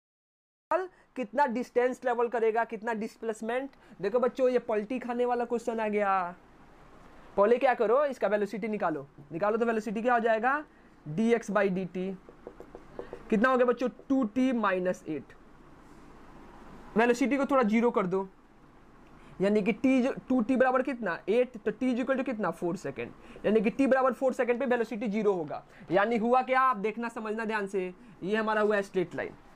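From 0 to 0.71 s there is digital silence, then sound begins abruptly mid-event: a cut-off start, where capture began late, unlike a fade-in's gradual rise.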